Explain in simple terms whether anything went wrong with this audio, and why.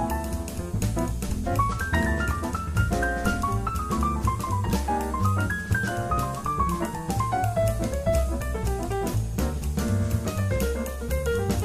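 Nothing went wrong with this audio, because there are no faults anywhere in it to explain.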